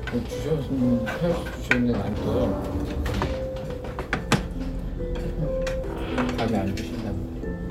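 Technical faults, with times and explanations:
2.13 s and 5.84 s, CD skip: the laser loses its track and lands on a different turn of the disc's spiral, so playback briefly mutes for just a few milliseconds, giving a tiny tick, then resumes from another point, making the sound jump abruptly.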